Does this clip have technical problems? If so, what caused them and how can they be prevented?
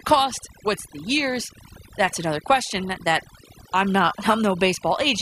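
Yes. Throughout the speech there is overdone noise removal: a noise reduction process applied far too aggressively to a noisy recording. Wherever a frequency band sits close to the estimated noise level it is pulled down hard or removed, and the quieter components of the voice are removed along with it. The background becomes near silence dotted with twinkling, chirpy specks. Preventing it means setting a gentler reduction amount and checking by ear before committing.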